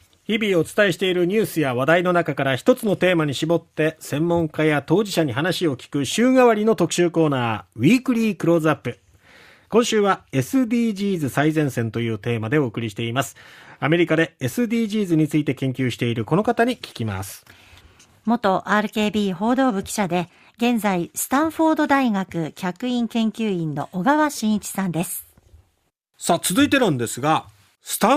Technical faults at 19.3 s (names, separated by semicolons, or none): none